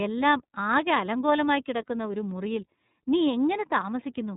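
From start to finish the speech carries the iLBC codec's signature: a hard band limit at 3.8 kHz, so sibilants lose their hiss and the sound turns thin and telephone-like. Each block is coded on its own, and the plainly audible roughness and slightly synthetic, buzzy texture fits 30 ms frames at around 13.33 kbps. A spectrogram shows an empty region above 3.8 kHz.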